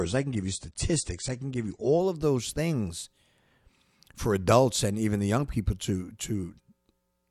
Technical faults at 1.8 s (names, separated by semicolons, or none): adaptive stream starting at a low bitrate